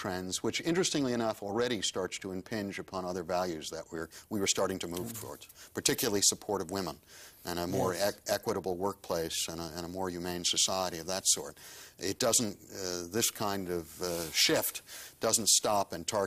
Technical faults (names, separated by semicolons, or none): pre-emphasis left on